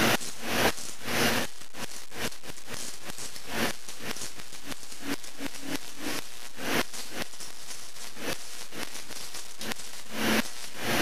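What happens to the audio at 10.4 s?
At 10.4 s the audio is still being read two samples at a time (double speed), as it is for the whole clip. Each adjacent pair of samples is taken as a single frame, as if the stream had two channels or samples twice as wide. Playback therefore runs at 2x speed with pitch raised 12 semitones, a full octave.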